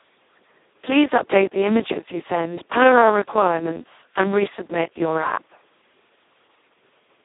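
From the start, the speech appears to have been likely truncated to about 9 bits without dither, leaving gritty, signal-following grain roughly 40 dB down that sputters on quiet passages. Throughout, heavy Speex codec damage at what sounds like a very low bitrate of around 2 kbps makes the speech hoarse and robotic, confined to 150 Hz to 3.7 kHz with nothing above 3.8 kHz.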